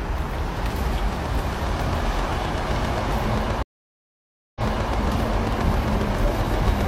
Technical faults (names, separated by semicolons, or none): train of clicks; stream reconnect